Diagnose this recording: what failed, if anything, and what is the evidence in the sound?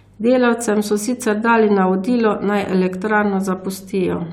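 Nothing failed in this recording, and there is no evidence of a fault anywhere in the sound.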